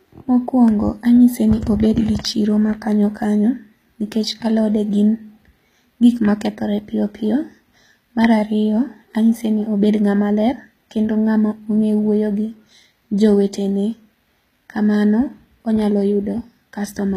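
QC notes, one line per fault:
Throughout, HE-AAC compression: the speech was likely encoded with HE-AAC at a very low rate, around 20 kbps. Only the lower spectrum is truly coded and the treble is rebuilt from copied lower bands, so sibilants turn gritty and metallic, with nothing above 14.9 kHz.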